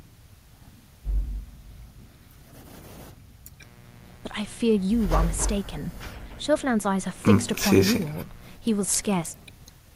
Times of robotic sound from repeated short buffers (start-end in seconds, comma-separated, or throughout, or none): none